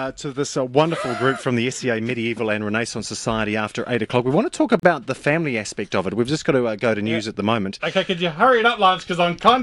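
A gap at a join of encoded pieces breaks the continuous sound from 4.80 to 4.83 s, a silence of about 37 ms. Separately encoded pieces were joined untrimmed, leaving encoder delay and end padding. Waveform and spectrogram show a blank strip with smeared edges, then sound resumes.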